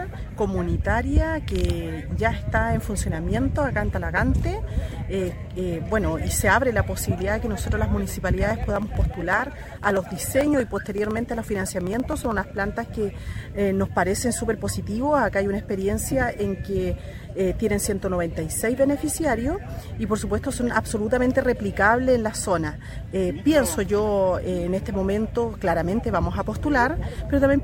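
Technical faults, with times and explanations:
8.51–12.57 s, periodic USB or driver dropouts: regular ticks every 63.5 ms. About half a millisecond is skipped each time, as the bus or driver stalls.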